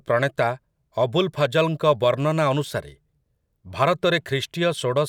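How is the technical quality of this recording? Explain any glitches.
The recording has one glitch. Sample clock jitter from 1.49 to 3.16 s: timing errors of around a microsecond, scaled by waveform slope, add a faint roughness roughly 45 dB below the speech.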